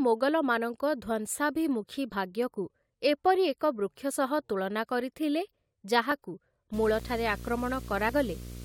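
At 2.12 s the speech gives a tiny skip. This is an overlap between stream segments: two consecutive segments claimed the same stretch of time, and the player trimmed that overlap from audio that had never actually been duplicated, so roughly 15 ms of speech simply disappears. The same fault returns at 6.12 s and, with a shorter loss of about 8 ms, at 8.09 s. The spacing fits segments about 2 s long. On a waveform each one appears as a sudden discontinuity where the trace jumps to a new value. On a spectrogram each shows as a thin vertical line of broadband energy.

From 6.73 s to the end, a video or display buzz sits underneath the speech. A screen or video cable is leaking into the audio path, producing a hum at the 60 Hz field rate with a harsh hash of harmonics above it, around 15 dB below the speech. A spectrogram shows this as a stack of evenly spaced horizontal lines at 60 Hz and its multiples, starting abruptly at 6.73 s. 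The waveform gains a fine, steady ripple under the speech.

At 7.00 s, within that buzzy stretch, a block of digital silence cuts in for 0.73 ms, which fits a block of about 32 samples. The output was replaced by zeros with no fade in or out, so both edges are hard steps and the hole is heard as a single sharp tick. In the waveform it is a flat segment, and the spectrogram shows a narrow vertical broadband stripe.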